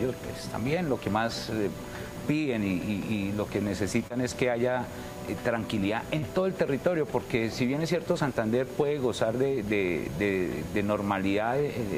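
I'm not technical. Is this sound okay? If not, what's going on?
No. There are two spots of short concealed packet loss, at about 4.07 to 4.12 s and 6.18 to 6.24 s. Tiny pieces of sound, about 20 and 40 ms, arrived too late, so the receiver patched each gap by stretching what came just before. That leaves a quick smear or wobble.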